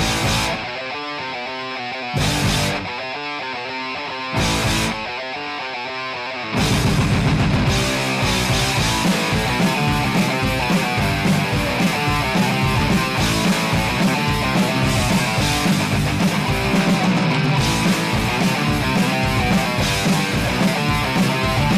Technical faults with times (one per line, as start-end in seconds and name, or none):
0.00-21.78 hard clipping